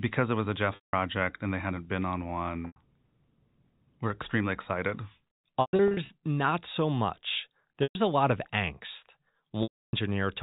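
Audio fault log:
0.75–0.93 s, 2.67–2.76 s, 5.61–6.09 s (scattered losses), 7.83–7.95 s, 9.63–9.93 s: packet loss with pitch repetition. The receiver loops the last pitch period, producing a brief buzzy hold. Over about 50 ms that hold fades to silence, and the speech cross-fades back in.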